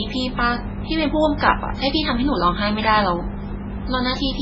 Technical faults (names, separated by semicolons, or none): MP3 compression